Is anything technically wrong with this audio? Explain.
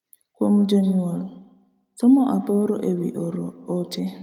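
Yes. From 0.54 s to the end there is feedback echo between two devices. A second device on the call replays this speech, and this microphone captures it again. The local echo canceller cannot remove it. The speech returns roughly every 150 ms, at most about 12 dB below the original.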